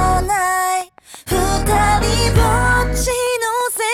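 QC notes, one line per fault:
0.81–3.93 s, train of clicks: a steady ticking cuts in at 0.81 s and runs to the end, about twenty near-identical pops evenly spaced at roughly 6.1 per second, peaking at about the level of the sound itself, so they stay plainly audible over it and through any quieter gaps. The matching shape and regular pace point to a repeating outside pulse, likely interference from nearby equipment or a faulty connection or power supply.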